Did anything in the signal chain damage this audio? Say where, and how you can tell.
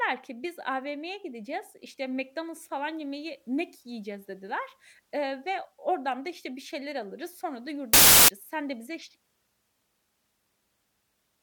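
Yes. From 7.93 to 8.28 s, about 0.35 s, the speech is replaced by loud, harsh broadband noise, a fault in sample-format conversion: samples built from the wrong bytes. The reader assembled each sample's bytes in the wrong order or alignment, so the rapidly changing low bits became the dominant part of every value. On the waveform the section jumps to dense, high-level hash; on a spectrogram it fills the spectrum with broadband energy.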